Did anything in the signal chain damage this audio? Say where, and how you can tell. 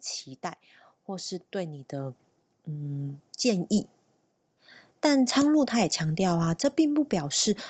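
Yes. In the call processing stage, automatic gain rising sets in from 1.07 s to 5.32 s. Over those four seconds the level climbs by about 10 dB, and the background noise swells right along with the speech. That shows an automatic gain control judging the input too quiet and slowly raising its gain. A talker moving closer would lift the voice alone, leaving the room noise steady. The call microphone's high-pass filter and its 8 kHz upper limit are normal for the call path.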